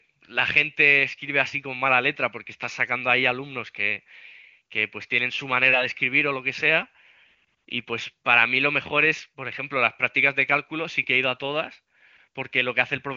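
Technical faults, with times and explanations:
Nothing stood out on listening to this speech.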